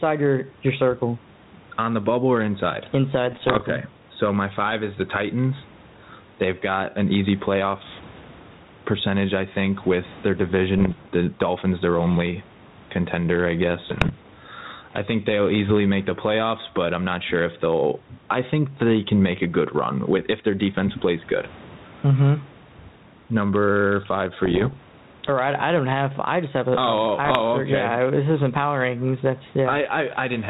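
The recording chain was likely run with far too much input gain, so a fast limiter or compressor keeps clamping down on every loud syllable of this speech clip and releasing in the pauses. The result is gain pumping throughout, with a swing of around 15 dB; the background room noise sits about 37 dB below the speech. Loud and quiet passages sit closer in level than they should, and the speech sounds squashed. On top of this, the ADPCM link, which behaves like a 32 kbit/s G.726 connection, picked up bit errors at 3.31 to 3.63 s, 10.78 to 11.09 s, 13.89 to 14.13 s, 24.43 to 24.78 s and 27.25 to 27.41 s, at an error rate of roughly one percent or a little under. Because ADPCM codes each sample as a difference from an adaptive prediction, a single flipped bit also throws off the decoder's step size and predictor. The error therefore rings on for some milliseconds instead of staying a one-sample click, and each of these spans is heard as pops and rough, gritty bursts with brief jumps in level.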